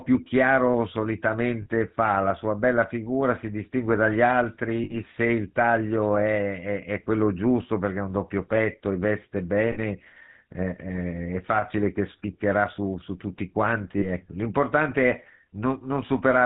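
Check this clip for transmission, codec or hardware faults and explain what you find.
Two faults are present: GSM full-rate codec damage throughout the speech, and four brief dropouts from lost GSM frames.

The GSM full-rate codec runs for the whole clip. The speech sounds buzzy and gravelly, with nothing above 4 kHz, which fits 13 kbps full-rate coding. The codec models the vocal tract as a filter and excites it with a sparse, regularly spaced pulse train that keeps only a third of the excitation samples. That coarse excitation produces the roughness, which is plainly audible here.

Lost GSM frames occur at 1.62–1.67 s, 4.84–4.96 s, 9.72–9.78 s and 13.98–14.06 s. At each point the speech freezes briefly into a rough, metallic ring. The gaps last 40 ms, except for the 60 ms gap at 4.84 s, which points to about three missing 20 ms frames. The decoder replaced each bad frame by repeating the last good frame's settings, so the sound holds and rings instead of cutting to silence.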